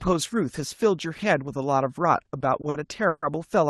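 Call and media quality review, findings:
Repeated stalls (stutter), 2.25–3.24 s: jitter buffer underran five times as packets arrived late or too slowly. Receiver stretched the last sound across the gaps, about 230 ms concealed in total, longest 140 ms. Nothing dropped, but the sound drags and hiccups through that stretch. Call path carrying it shows a top end stopping near 12 kHz, consistent with Opus at around 20 kbps.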